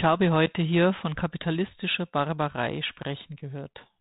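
No technical faults turn up in this speech, which comes through the narrow telephone band of G.726 ADPCM coding at 32 kbit/s working as intended.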